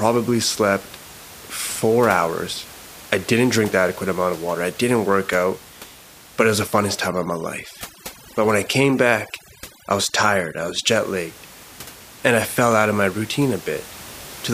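A speech recording with room noise sitting about 20 dB below the voice, and from 7.07 to 10.87 s overdone noise removal takes hold. The noise reducer clamps down hard on any band close to its noise profile. The room tone drops and breaks up into twinkling specks, and the voice loses its quieter components as they are stripped away along with the noise.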